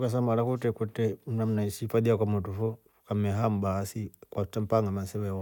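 No technical faults can be heard, so there is nothing to place in time order.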